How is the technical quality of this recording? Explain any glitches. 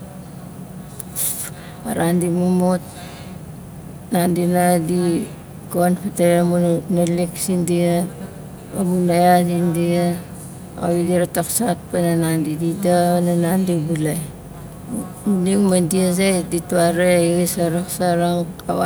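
Nothing in the recording stood out as a technical problem on listening, so there are no glitches to explain.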